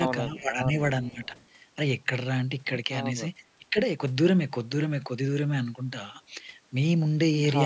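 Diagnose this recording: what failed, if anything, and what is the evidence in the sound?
The failure sits in the call processing stage: the echo canceller likely misjudged moments when both ends spoke at once and attenuated the near talker along with the echo. This is speech suppressed in double talk. The speech sinks by about 15 dB from 0.22 to 0.73 s and from 1.11 to 1.34 s, and by about 20 dB from 3.58 to 3.77 s. Each time it audibly ducks, then recovers.

Also in call processing, the far end's echo canceller likely left part of its loudspeaker pickup uncancelled and sent it back. This is echo leak. A faint delayed copy of the speech, trailing by 453 ms, appears briefly from 0.37 to 0.43 s at about 25 dB below the speech, and again from 1.02 to 1.46 s at about 30 dB down. It sounds like a quiet ghost behind the talker within the call's normal 8 kHz bandwidth.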